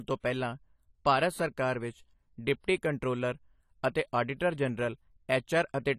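From start to end the speech carries plainly audible codec damage, with nothing above 14.1 kHz. The top band is sharply cut, so the sound is dull, and sibilants come out smeared and fizzy, with a warble on sustained sounds. The likely cause is AAC compression: the coder quantises each frame's spectrum against a hearing model and, short of bits, drops high bands and coarsens the rest, which points to a low bitrate around 32 kbps.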